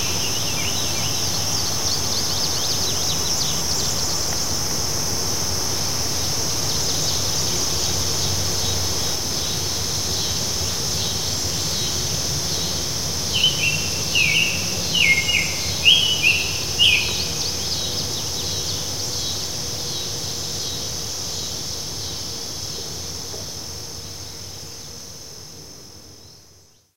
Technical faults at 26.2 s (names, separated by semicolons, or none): none